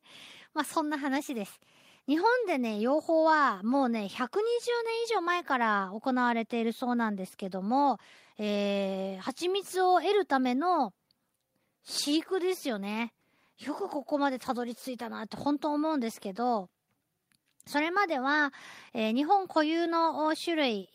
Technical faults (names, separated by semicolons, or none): none